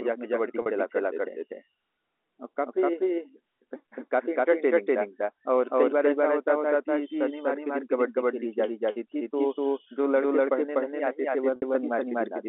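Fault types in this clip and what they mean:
Doubled audio track: a second full-band copy of the speech runs about 300 ms behind at roughly the same level, likely from the signal being captured twice along a slower path. Unlike a room echo, it has no decay or reverberant colouring, and the two copies stay in lockstep throughout.
Packet loss with pitch repetition: short gaps in the stream are bridged by repeating the last pitch period. The 40 ms loss at 0.62 s comes across as a brief, slightly buzzy held tone, and the 60 ms loss at 11.56 s fades into silence before the speech returns with a short cross-fade. This is unlike a dropout, where the sound cuts to silence, or a click, which is instantaneous.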